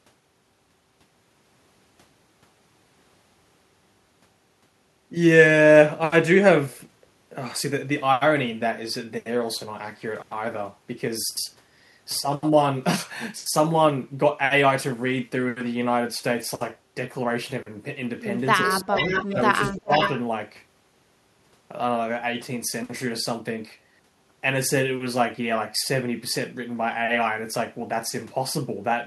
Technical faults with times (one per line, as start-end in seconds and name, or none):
18.66-18.93 speech suppressed in double talk
18.67-19.42 echo leak
19.25-19.37 speech suppressed in double talk
19.67-20.14 echo leak
19.78-19.92 speech suppressed in double talk